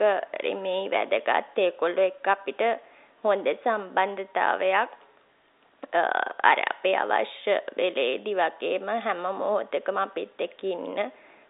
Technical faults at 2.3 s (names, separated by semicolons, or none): none